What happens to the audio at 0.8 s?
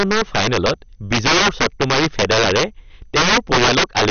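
At 0.8 s the speech carries integer overflow across the whole clip: driven about 10 dB past full scale, a small share of peaks wrap to the opposite sign, producing harsh cracks. MP2 compression is also present throughout, likely the cause of the dull, gurgling texture: upper sub-bands are starved and switched off, leaving nothing above 6.5 kHz, which points to a low bitrate around 48 kbps.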